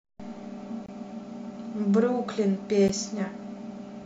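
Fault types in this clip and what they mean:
Gap between stream segments: adjacent segments' timestamps leave a hole the player fills with silence, so nothing is lost but time is inserted. Here two hard-edged dropouts, 0.86 to 0.89 s (about 24 ms) and at 2.88 s (about 12 ms), fall 2 s apart, matching the segment length.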